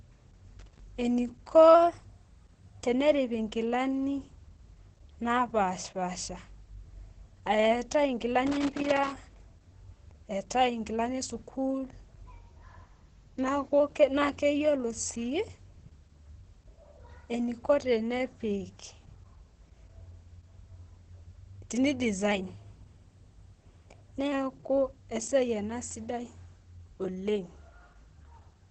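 The whole clip carries Opus voice compression: heavy SILK coding with nothing above 8.8 kHz, muffled and slightly robotic, which points to roughly 10 kbps. From 0.59 to 0.80 s there's a loose connector crackle, an irregular scratchy burst as a contact makes and breaks. Then from 1.75 to 2.88 s the speech runs about 6% fast and a semitone sharp before snapping back, likely a drift correction step where clock-matching software jumped the playback rate to manage its buffer. The connector crackle returns from 8.47 to 9.12 s. Another step goes the other way from 12.32 to 13.80 s, about 6% slow and a semitone flat, recovering just before "na keyiolo". The fast, sharp version comes back once more from 22.32 to 24.32 s.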